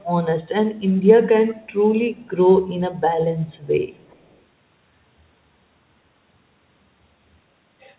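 Echo leak appears at 0.01–0.06, 1.66–1.72, 2.16–2.29, 3.46–3.67 and 3.97–4.39 s: a very faint copy of the speech about 391 ms late, a little stronger in the last stretch. It likely slipped past a loudspeaker-side echo canceller. On a spectrogram it shows as weak, shifted repeats of the speech harmonics, all below the 4 kHz ceiling that fits a G.711 call codec.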